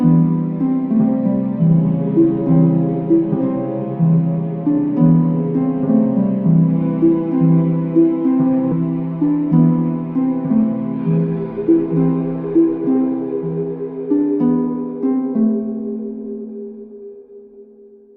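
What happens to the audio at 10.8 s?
At 10.8 s the audio is inside a jitter buffer speed-up running from 10.62 to 11.95 s. After the receiver's buffer had filled beyond its target, it trimmed short pitch-period-sized pieces again and again, discarding about a tenth of a second in total. Playback runs at about 108% speed with unchanged pitch, so it sounds hurried. A spectrogram keeps the same harmonic spacing while events crowd closer together in time, and the waveform shows repeated cycles cut out at the joins.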